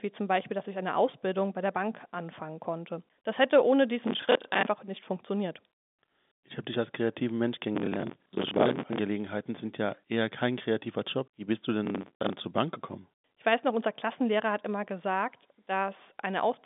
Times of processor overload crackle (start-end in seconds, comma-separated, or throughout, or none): 4.07-4.66, 7.75-8.98, 11.86-12.33